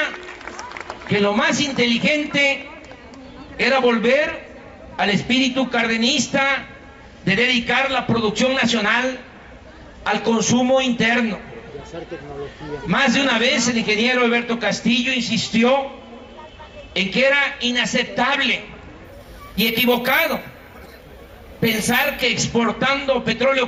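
From 19.05 to 22.22 s, imaging from sample-and-hold upsampling: each sample was simply repeated, with no smoothing filter, which fits a 16 kHz stream raised to 48 kHz. Mirrored spectrum copies fill 8 to 16 kHz at about 14 dB below the sound, heard as a bright metallic fizz tracking its level.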